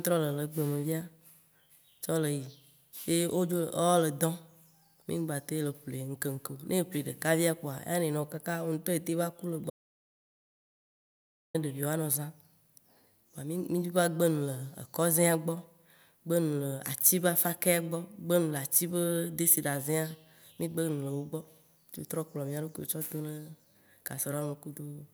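At 9.70 s, just after "etem va ku le", the speech cuts out mid-flow. This is an audio dropout to silence lasting 1.84 s, until 11.54 s. The gap is silent with no room tone. The input was likely lost while recording continued writing silence.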